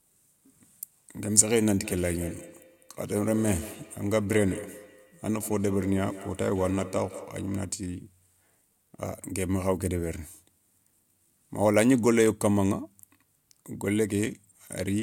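From 1.77 to 7.87 s, feedback echo between two devices: a second device's output re-enters the microphone, returning the speech roughly every 150 ms, about 15 dB down.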